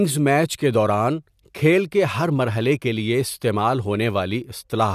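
No dropouts, clipping, glitches or other transport or processing faults register anywhere across the speech.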